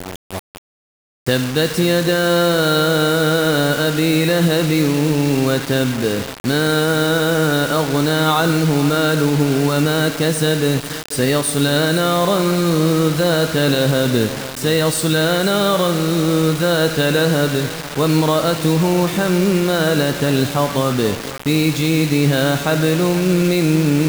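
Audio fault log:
Throughout: low bit depth without dither. The whole clip carries a grainy, gritty distortion that shifts as the sound changes. The roughness sits only about 15 dB below the signal, so it is plainly audible. The likely cause is rounding to about 4 bits with no dither. The error then tracks the waveform.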